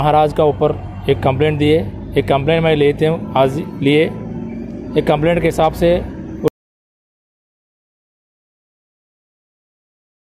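An audio dropout to silence begins at 6.48 s and runs to the end of the recording, so the sound stops abruptly mid-flow and never returns. The gap is silent, with no room tone or background hiss underneath, which points to the input signal being lost while the recorder kept writing silence. The likely cause is a disconnected device, a failed link or an accidental mute, and nothing from that final stretch survives.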